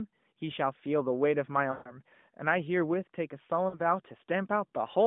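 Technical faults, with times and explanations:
1.72–1.94 s and 3.70–3.80 s, lost AMR speech frames: the decoder stretches the last good sound and fades it rather than cutting to silence as a plain dropout would. The first, longer run (about seven 20 ms frames) fades nearly out; the second is a brief dip.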